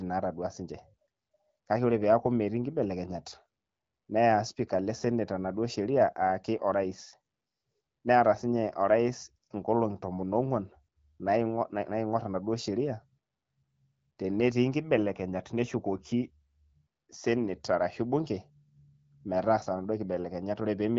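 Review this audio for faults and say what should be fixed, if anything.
Nothing in this audio needs to be fixed, as the review turns up no faults.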